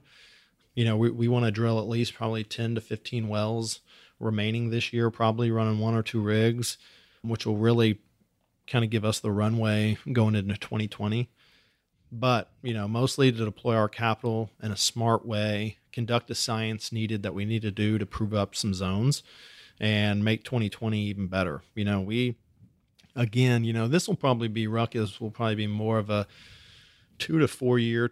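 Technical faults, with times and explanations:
No technical faults can be heard anywhere in the recording. There is nothing here that needs a time or an explanation.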